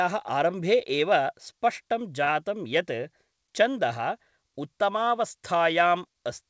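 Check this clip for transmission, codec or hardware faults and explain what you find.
There's one transmission fault in this speech, a short stall from a late packet, at about 2.24 to 2.29 s. A packet didn't show up on time, the jitter buffer ran dry, and the receiver stretched the last bit of sound by roughly 35 ms until the packet arrived, then carried on from where it left off. Nothing is lost, but that moment is held a touch too long and may carry a faint buzz or dip. The call path stays in place throughout, with nothing above 8 kHz, which fits G.722 at 64 kbps.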